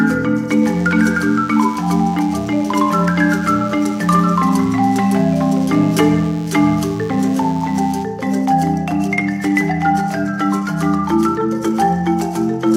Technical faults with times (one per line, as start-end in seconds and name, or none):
0.63-8.03 DECT cordless phone buzz